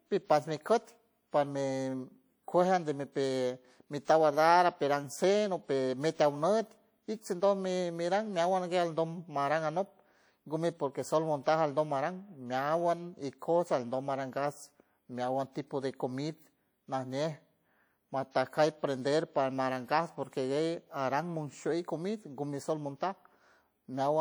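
Throughout the speech, the sound has the smeared, swirly texture of a heavily compressed source, even though the spectrum extends up to 20.2 kHz with nothing above it. That mismatch points to low-bitrate audio saved at a high bitrate. The artefacts fit a first pass through a codec at around 48 kbit/s, likely WMA, followed by re-encoding as a 320 kbit/s MP3. The second encoding makes the file larger but cannot recover the detail the first one discarded.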